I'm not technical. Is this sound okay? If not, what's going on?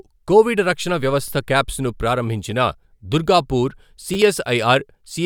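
No, there are two small glitches, both a repeated buffer. The playback device didn't get fresh audio in time, so it replayed the tiny chunk it had just played. At 1.28 s, between "కోవిడ్ రక్షణ" and "కాప్స్ ను", one chunk plays twice. From 4.14 to 4.16 s, one chunk plays three times. Each chunk is so short, which fits about a 10 ms buffer, that you'd hear a quick click or buzz rather than a stutter.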